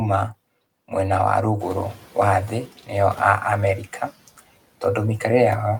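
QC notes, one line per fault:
1.59–2.69 s, noise suppressor catching up: room noise jumps near 1.5 s, leaks through briefly, then drops about 8 dB once the suppressor adapts.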